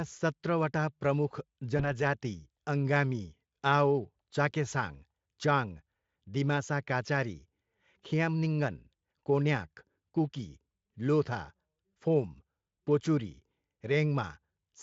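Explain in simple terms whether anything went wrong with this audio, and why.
At 1.77 s, VoIP packet loss concealed by the speech codec: unlike a silent dropout, the missing sound is smeared into a buzzy tone or a coloured noise that fades, which fits one lost 20 ms frame, and it stays distorted until 2.04 s.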